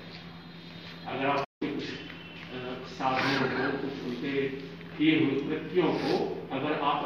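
At 1.44 s the sound cuts to silence until 1.62 s, then carries on: a playback stall, likely the player starving for data or its thread blocking.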